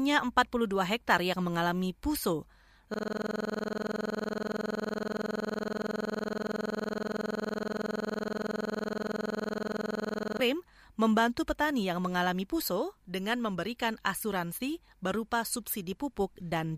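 At 2.94 s, after "mengalami puso", a system hang loop begins. It lasts until 10.40 s. The system froze while the hardware kept replaying one 46 ms slice, which fits a 2048-sample buffer. This makes a rattling buzz at 21.5 Hz.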